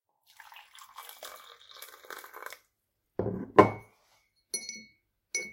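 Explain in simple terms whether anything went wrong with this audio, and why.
Nothing went wrong that I could hear; listening carefully, no fault or problem stood out anywhere in this recording.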